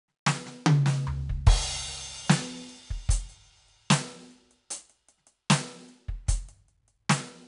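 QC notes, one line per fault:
throughout, 4-bit ADPCM compression: gritty hiss rides every loud passage of the music, attacks sound roughened, and the top is dull above 10.6 kHz. Coarse 4-bit predicted steps leave level-following noise and lag on transients. The cut-off fits a sample rate near 22 kHz.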